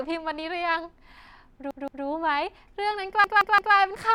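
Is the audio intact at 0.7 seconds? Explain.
Yes, the audio is intact at 0.7 seconds, with no fault at that moment.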